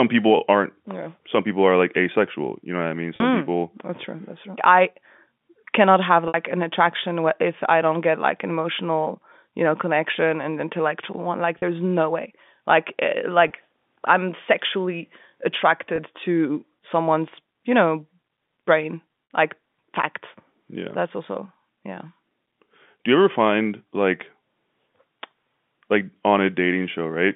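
Six brief dropouts are bridged by packet loss with pitch repetition: 3.16 to 3.20 s; 6.28 to 6.34 s, between "cannot have" and "an attraction if I"; 11.58 to 11.62 s, before "no way"; 13.48 to 13.50 s, before "I'm sexually"; 15.96 to 15.98 s; and 19.24 to 19.30 s. Gaps of 20 to 60 ms fit one to three lost 20 ms packets, filled by looping the last pitch period. The shorter ones sound like a held, buzzy blip, while the 60 ms ones fade into silence before the speech cross-fades back. In the telephone-band G.711 audio, a spectrogram shows frozen harmonic stripes, and the waveform shows identical repeated cycles.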